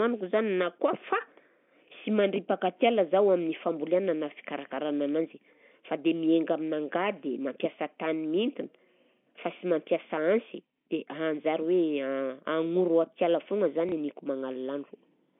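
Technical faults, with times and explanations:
13.89 to 13.92 s, packet loss with last packet repeated: a 30 ms stretch, consistent with one lost packet, is filled by replaying the previous packet. The single repeat is heard as a small blip.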